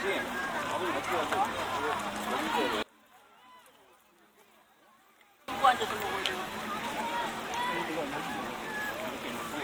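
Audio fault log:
2.83–5.48 s: one channel inverted, likely; the summed sound drops about 28 dB as shared content cancels, leaving only a faint inter-channel difference.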